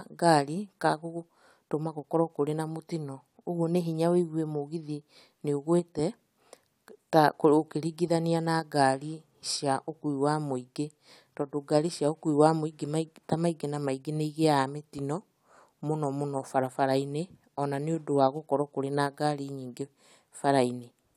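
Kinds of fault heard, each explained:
No kinds of fault are heard in this speech clip.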